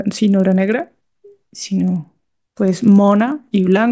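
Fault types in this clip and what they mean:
resampler restarted on every block: each 40 ms block converted from 24 kHz to 16 kHz separately, leaving edge errors heard as a 25 Hz buzz; spectrogram shows thin vertical lines every 40 ms during speech.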